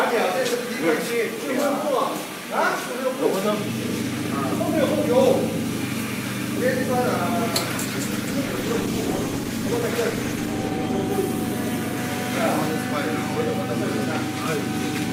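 A call bitrate drop from 7.86 to 12.79 s turns the audio rough and muffled, worst for about 2.6 s, which fits a fall from around 96 to 14 kbps; spectrograms show the upper band vanishing.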